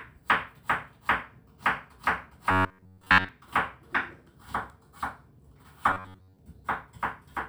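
From 2.51 to 3.29 s, and again from 5.91 to 6.39 s, the sound becomes a rigid metallic buzz at 93.8 Hz, which is robotic sound from repeated short buffers. The likely cause is a roughly 10.7 ms chunk being replayed while fresh audio is skipped. The first stretch is entirely repeated; the second, about 70%. Unlike a dropout or stutter, there is no silence or audible jump, only a steady imposed pitch.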